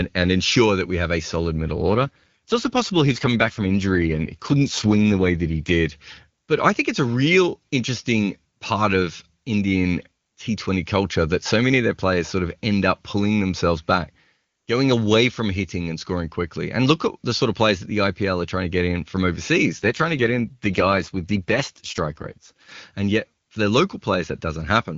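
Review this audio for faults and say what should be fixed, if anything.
An AMR rate drop occurs twice, from 1.76 to 5.72 s and from 19.79 to 22.72 s. In both stretches the speech turns rougher and more synthetic while the bandwidth stays the same and there is no gap, which fits the link adapting the AMR-WB codec down from about 23.85 to 8.85 kbit/s. At that lower rate the codec spends more of each frame on error protection, leaving fewer bits for the speech itself. It returns to its clear 23.85 kbit/s sound once each episode ends. To prevent it, improve radio coverage or signal quality on the call path so the network has no reason to lower the codec rate.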